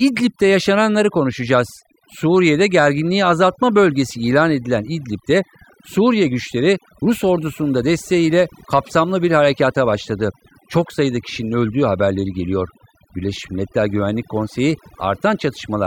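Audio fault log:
Throughout: overdone noise removal. Noise reduction set far too aggressively gates individual frequency bands down whenever they sit near the estimated noise floor, taking low-level parts of the speech with them. The background drops and breaks up into twinkling, chirpy specks. On a spectrogram the gaps between syllables look almost empty apart from scattered isolated dots, and the edges of the speech energy look ragged and patchy.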